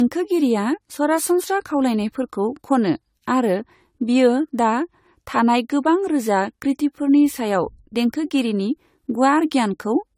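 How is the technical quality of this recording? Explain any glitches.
The technical quality is compromised throughout by one fault. Generation loss runs across the whole recording, giving the speech a swirly, hollow, smeared character with softened consonant attacks. The likely cause is repeated lossy encoding, sounding like around seven passes through AAC-LC at a rate that points to 64 kbit/s. Each pass requantises on a shifted frame grid, so the errors compound. On a spectrogram, expect patchy holes and blurred onsets, with nothing above 19.7 kHz.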